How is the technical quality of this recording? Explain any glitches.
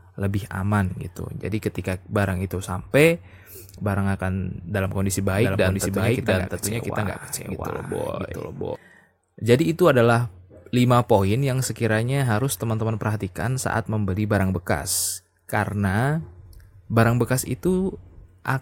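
The recording has one clear glitch, a doubled audio track. It runs from 5.32 to 8.76 s, starting just after "akan dalam kondisi". A second copy of the speech plays alongside the original, trailing by roughly 0.7 s. It is about as loud as the original. It has no reverb tail or room colour, and it cuts in and out abruptly. The likely cause is the same signal being captured twice, once through a slower path.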